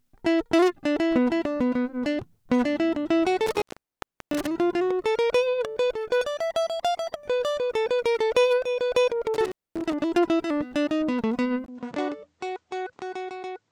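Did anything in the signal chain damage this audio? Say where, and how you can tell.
Yes, two stages damaged this music. The first is the analogue wiring. There is an intermittent contact at 3.47 s. From there to 4.47 s the line opens for about 695 ms. A second dropout runs from 9.34 s to 9.93 s, open for about 239 ms. Each cut begins and ends with crackle. In between, only faint hiss remains. That is a loose cable or plug losing and regaining contact.

The second is at the input stage. At 11.66 s the sound drops out for 20 ms and comes back changed through to the end. Nothing remains above 8.8 kHz, so it turns dull. The level falls by roughly 10 dB. A new noise floor appears, roughly 40 dB below the music. This points to the input being switched to a poorer device, likely the system picking another microphone or a headset profile mid-recording.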